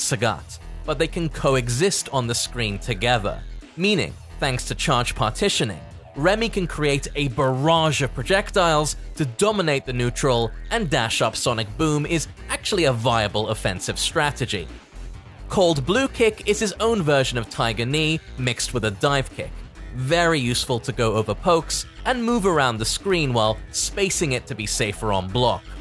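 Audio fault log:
throughout resampler restarted on every block: the converter was reset at each 20 ms block and filled each block's edges with wrong neighbouring samples. The edge errors repeat 50 times a second, a rate set by the 20 ms block length in a 48 kHz to 24 kHz conversion, and sound as a buzz that is present only under the signal.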